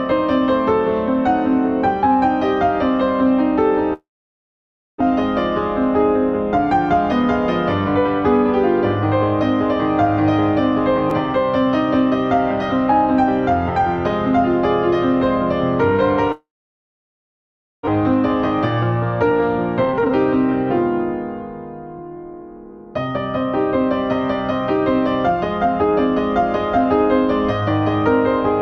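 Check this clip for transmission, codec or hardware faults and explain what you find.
Three kinds of fault appear: two long network dropouts, one repeated buffer, and two stretches of jitter buffer speed-up.

Long network dropout, 3.93 to 5.02 s and 16.32 to 17.89 s: the link likely stopped delivering audio for about a second each time. The receiver carries the last sound on briefly before it fades, leaving about 0.9 s and then about 1.4 s of silence. Playback resumes with that audio missing, and after the second gap it comes back roughly half a second later than before.

Repeated buffer, 11.10 s: fresh audio missed its deadline, so the device replayed its last 5.8 ms block two more times, which fits a 256-sample buffer. Roughly 10 ms of real audio is lost, and the block is so short that the repeats come across as a click or a tiny buzz.

Jitter buffer speed-up, 19.30 to 20.14 s and 21.99 to 27.62 s: the receiver's buffer had grown past its target, so it trimmed out pitch-period-sized slices to reduce the delay. 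The first stretch runs at 128% speed and is clearly hurried, while the second plays at 103%. Each removes about 0.2 s, and the pitch stays the same.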